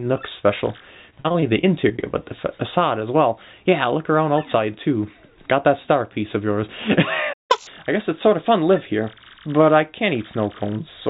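Between 1.1 and 2.04 s the audio breaks up with repeated packet loss (robotic sound): a rapid run of short holes, the longest about 44 ms, each patched by stretching the previous sound, so about a fifth of that stretch is concealment. On a spectrogram this appears as smeared, repeating harmonic blocks with little new detail. At 7.33 s a playback stall cuts the output to silence for about 160 ms, likely because the player's buffer ran dry. The waveform shows a flat gap and the spectrogram a blank vertical band. From 7.51 to 7.67 s comes catch-up at higher speed, with the backlog played at 2x. Pitch jumps by roughly ten semitones, shown as harmonics shifted sharply upward and a compressed waveform, before settling back. Across the whole clip, the call path leaves nothing above 4 kHz, which fits a narrowband codec such as G.711.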